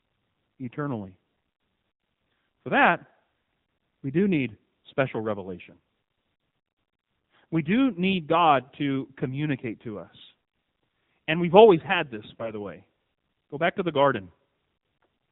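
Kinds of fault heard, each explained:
AMR narrowband mobile codec: narrowband mobile coding throughout; spectrogram is empty above 4 kHz, speech sounds buzzy and synthetic, fitting a low mode near 7.4 kbps.
AMR bit errors: from 12.30 to 12.54 s, corrupted frames misplace the voice model's pulses; speech turns gargly at steady level, harmonics smeared into noise on a spectrogram.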